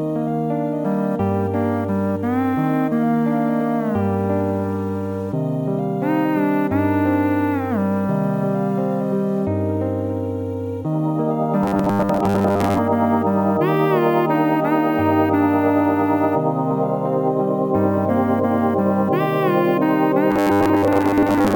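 From 11.63 to 12.78 s and again from 20.31 s to the end, robotic sound from repeated short buffers: a rigid 100 Hz buzz, likely from 10 ms blocks being replayed while incoming audio is dropped, covering about half the sound first, then most of it.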